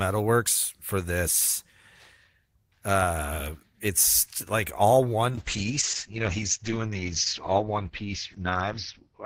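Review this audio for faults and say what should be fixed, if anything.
A call bitrate drop starts at 5.3 s and lasts to the end of the clip. The encoder's bit budget collapses, consistent with a fall from about 32 kbps to 8 kbps, so the speech turns coarse and watery, and the top end narrows from 20 kHz to 6 kHz for the last 3.5 s. Adding bandwidth headroom and smoothing the estimator's reaction to brief congestion would keep the encoder from being pushed that low.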